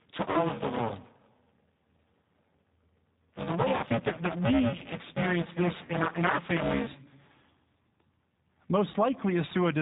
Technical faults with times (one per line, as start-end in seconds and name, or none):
0.00-9.81 G.729 codec
0.00-6.87 buffer tearing
0.31-0.37 VoIP packet loss concealed by the speech codec
3.77-3.83 VoIP packet loss concealed by the speech codec
5.85-5.92 VoIP packet loss concealed by the speech codec
8.91-8.96 VoIP packet loss concealed by the speech codec